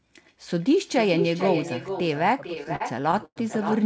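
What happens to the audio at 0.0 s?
From the very start at 0.0 s the speech is trailed by a quieter, thinner copy of itself, about 8 dB below the direct sound and arriving roughly four tenths of a second later. This echo with no canceller continues through the whole clip. The far end is playing the call through a loudspeaker, its microphone captures that playback, and nothing subtracts it, so the sound returns after the network round trip, band-limited to 8 kHz like the rest of the call audio.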